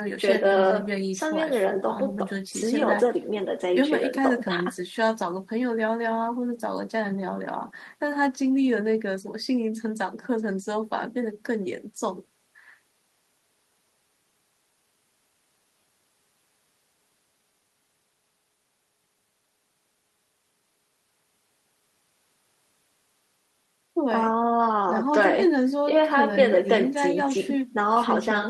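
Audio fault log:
Nothing to log here, as the speech came through without a single problem worth noting.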